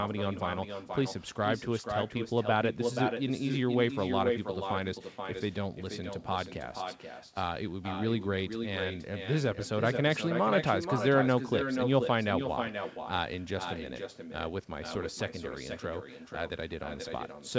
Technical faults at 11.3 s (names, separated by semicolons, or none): echo with no canceller